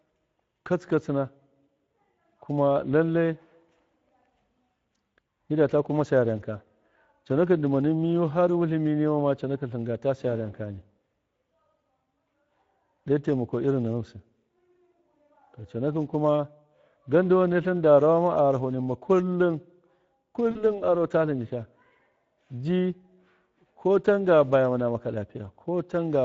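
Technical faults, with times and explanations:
Throughout: Speex codec. The speech has been squeezed through Speex, a CELP codec, at a rate that fits about 16.8 kbps. At that rate the excitation signal gets few bits. So the voice comes out hoarse and grainy, with a noisy edge. The codec damage is plainly audible. The encoder models the vocal tract well enough. The fine detail of the pulse driving it is coarse, and that is what you hear.
20.51 to 20.65 s: VoIP packet loss concealed by the speech codec. A short gap fits about 40 ms of lost audio, two frames' worth. The decoder filled it by repeating its last pitch and spectral shape while turning the level down. That gives a brief stretched, fading sound instead of silence. Each frame is predicted from the one before. So the distortion lingers past the gap, and the speech takes a moment to sound right again.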